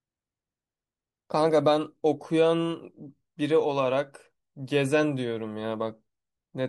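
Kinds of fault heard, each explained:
Nothing in the speech stood out as a fault on listening.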